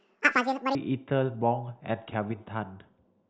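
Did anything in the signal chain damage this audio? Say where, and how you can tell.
Yes. A wrong sample rate fault runs from 0.0 to 0.75 s at the playback stage. Over that stretch the speech is exactly twice as fast and a full octave (12 semitones) higher, and it sounds squeaky and rushed. Because speed and pitch shift together by the same factor, samples are being clocked out at double their original rate with no resampling. That fits audio captured at 8 kHz being played as if it were 16 kHz.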